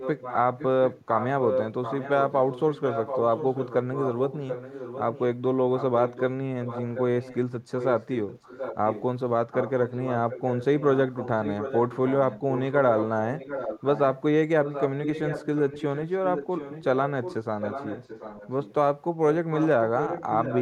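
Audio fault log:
0.00–5.21, 5.77–6.22, 6.62–7.37, 7.78–9.03, 9.51–14.21, 14.65–18.74 and 19.52–20.62 s: echo leak. A second copy of the speech trails the direct sound by 0.73 s at roughly 10 dB lower, likely loudspeaker output picked up by the far-end microphone and left uncancelled by its echo canceller.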